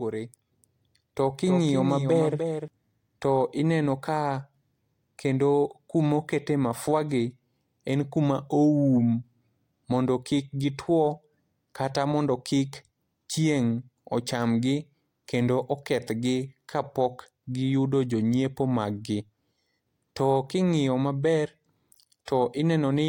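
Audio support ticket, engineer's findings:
Doubled audio track, 0 to 2.68 s, already running at clip start. Likely a second, slower capture path or an edit layering an offset copy. Full-band duplicate of the speech trails by roughly 300 ms, about 5 dB down, dry with no room tail, stopping abruptly at 2.68 s.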